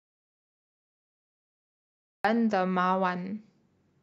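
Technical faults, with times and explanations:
0.00–2.25 s, audio dropout to silence: The clip opens in dead silence, with no room tone. Speech then cuts in abruptly, mid-flow. The input was likely lost while the recorder kept writing silence. Whatever was said there is gone.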